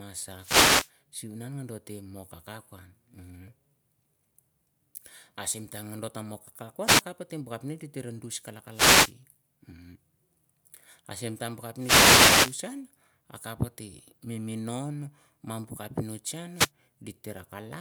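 At 0.39 to 0.91 s, 6.85 to 7.02 s, 8.71 to 9.15 s, 11.75 to 12.60 s and 16.53 to 16.71 s, there is a wireless microphone noise hit: a short swish or burst of static. Each one marks a dropout in the analogue FM radio link, where reflected signals cancel at the receiver and its noise floor rises over the voice. The longest dropout lasts about 0.86 s.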